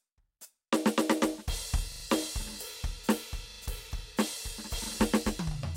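A music clip with repeated buffer stutters at 1.92–2.04 s, 3.52–3.60 s and 4.84–4.88 s, where a 40 ms slice replays three, two and one extra times. The waveform shows identical copies with hard joins, and the spectrogram shows thin vertical seams.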